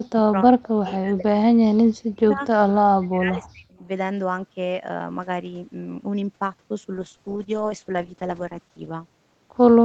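From the start to 1.36 s, again from 1.55 to 2.42 s, and from 2.77 to 3.83 s, the speech sinks and breaks up in pieces, dropping by about 40 dB at its deepest. Within each stretch the loss adds up to roughly a second, or about 0.7 s in the middle one. The pattern points to speech suppressed in double talk. Another party was likely speaking at the same moment, and the echo canceller, unable to tell this talker from loudspeaker echo, attenuated both.

From 6.97 to 8.98 s the coding turns coarse, and the speech takes on a rough, watery texture. This is a call bitrate drop. A falling bandwidth estimate made the Opus encoder spend far fewer bits, and the sound fits a fall from around 40 kbps to roughly 13 kbps that holds at its lowest for nearly two seconds. The audio then returns to the coding quality heard before 6.97 s, where the band reaches up to 8 kHz.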